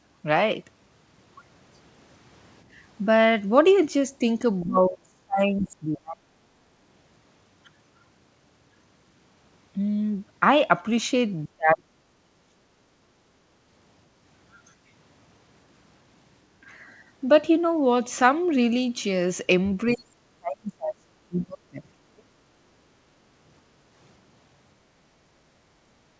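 Speech recorded over a call path whose band stops at 8 kHz, which fits a wideband codec such as G.722, with echo-control faults across the clip. At 4.61 to 4.65 s a brief scrap of a second voice comes through about 30 dB below the talker. This is likely other side's voice leaking through: the loudspeaker signal reached the microphone and the canceller did not fully subtract it, so a faint remnant survives for about 40 ms. Immediately after, from 4.66 to 6.41 s, the talker's own voice sinks for roughly one and a half seconds, dropping by about 35 dB at its lowest. The same happens from 11.48 to 12.71 s, about 40 dB deep over roughly a second, and from 19.86 to 22.32 s, about 35 dB deep over roughly two seconds. These dips are likely speech suppressed in double talk: both ends were active, and the canceller could not separate near-end speech from echo, so it turned the near-end voice down along with the echo. 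From 6.70 to 6.79 s the room tone briefly drops by 6 dB and returns after about 0.1 s. This is background gated by the echo canceller, a short clamp on the microphone while loudspeaker output was present, released once the canceller let go.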